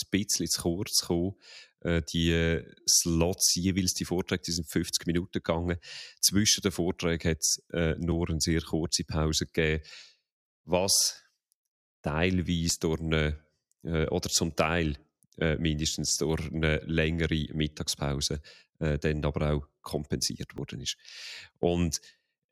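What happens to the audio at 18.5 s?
At 18.5 s the audio carries on intact, with no fault to be heard at that moment.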